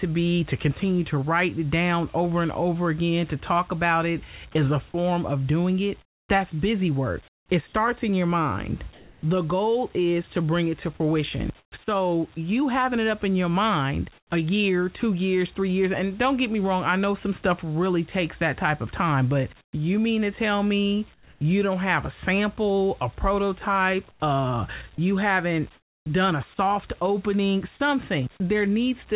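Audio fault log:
6.02–9.23 s, comfort noise in place of the background: roughly 0.78 s of the pause loses its real room tone to flat, featureless hiss, likely because the sender stopped transmitting during silence.
11.60–11.72 s and 14.18–14.30 s, comfort noise in place of the background: right after "bring it to fruition" and "up in your mind", a 120 ms gap drops about 16 dB into smooth synthetic noise before "so you having it" and "a year two years", likely from the voice detector pausing transmission.
19.61–21.41 s, comfort noise in place of the background: about 0.39 s of this quiet stretch turns into steady, detail-free hiss, likely the receiver filling a transmission pause.
24.11–27.80 s, sound chopped by the voice detector: after "a sample a prototype", the detector likely keeps switching on and off, so about 0.42 s goes to fill noise.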